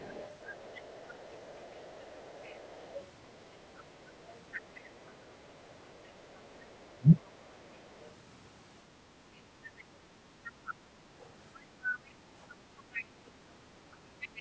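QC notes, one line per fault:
0–3.06 s, 3.77–4.9 s, 6.34–7.17 s, 8.0–8.1 s, 9.78–9.84 s, 10.45–13.04 s, 14.21 s to the end: other side's voice leaking through. A faint second voice sits under the main talker, mostly about 30 dB down. It's strongest, about 20 dB down, across 10.45–13.04 s and barely there, about 40 dB down, at 8.0 s. The likely cause is an echo canceller that didn't fully strip the far end's loudspeaker playback out of the mic.
6.97–7.08 s: speech suppressed in double talk. The talker's level drops briefly, by something like 25 dB, for about a tenth of a second. The drop lands inside the 6.34–7.17 s leak, while the far side is also audible. That points to the echo canceller likely getting confused with both sides active at once and ducking everything, including the near talker.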